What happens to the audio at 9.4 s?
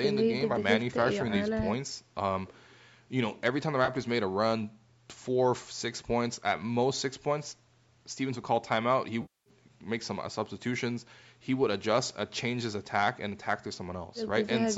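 At 9.4 s the audio falls inside an AAC frame loss with concealment lasting from 9.22 to 9.50 s, about 240 ms, which fits roughly two dozen short low-delay frames going missing. The decoder fills the gap from the last good spectrum with randomised phase, fading it down as the loss continues, so the sound turns smeared and noisy and then sinks toward silence before recovering. A spectrogram shows blurred energy dimming across the gap. The waveform shows a shrinking envelope.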